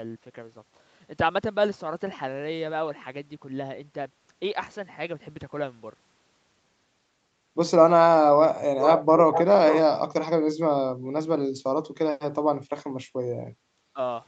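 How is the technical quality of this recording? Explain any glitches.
The recording has three kinds of call-processing glitch, all in the second half of this 14-second speech clip.

Echo leak, at 8.8 to 9.04 s, 9.32 to 9.44 s and 9.67 to 9.79 s: a far-end echo canceller likely left residue, so short delayed scraps trail the speech by about 431 ms, only roughly 5 dB quieter.

Background gated by the echo canceller, at 13.58 to 13.65 s: the canceller clamped the microphone while its loudspeaker played, making the room sound dip about 6 dB for roughly 70 ms.

Speech suppressed in double talk, at 13.93 to 13.98 s: with both sides talking, the canceller likely turned down the talker too, so the voice briefly drops by roughly 15 dB for a moment.

The Opus call path leaves no content above 8 kHz, which is expected for this kind of call audio and not one of the glitches.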